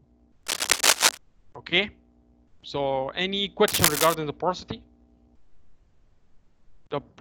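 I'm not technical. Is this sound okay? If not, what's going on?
No. There are two bursts of cable scratch noise, from 0.43 to 1.18 s and from 3.68 to 4.15 s. Each is a short stretch of harsh, uneven scratching laid over the sound. The first is louder than the sound itself. The second is about as loud as it. The likely cause is a worn cable, plug or control being moved, so the electrical contact flickers and lets bursts of noise in.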